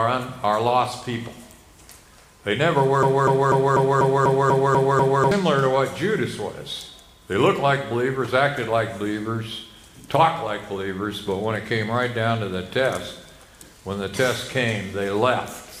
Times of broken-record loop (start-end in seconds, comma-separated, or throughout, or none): 3.03-5.31